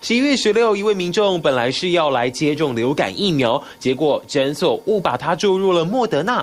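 No technical faults can be heard anywhere in the audio.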